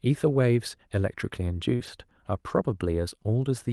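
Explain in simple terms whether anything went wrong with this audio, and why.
Two network problems hit this speech clip almost back to back, just before the two-second mark.

First comes a short concealed packet loss, from 1.75 to 1.81 s. About 40 milliseconds of the call arrived too late for the receiver to play. To hide the hole, the receiver kept the last bit of sound going, copying its pitch or filling with shaped noise, then blended back into the real audio. You hear this as a brief smear or wobble, and any quick consonant in that spot can disappear.

Overlapping it, from 1.79 to 1.89 s, is a lost packet rebuilt from error correction. Here the missing pieces weren't simply guessed. Each following packet carried a rough backup copy of the one before, and the decoder played those copies instead. That covers about 60 milliseconds, which fits three separate lost packets. Nothing drops out, but that tenth of a second sounds grainier and noisier than the audio around it, within the call's normal sound quality.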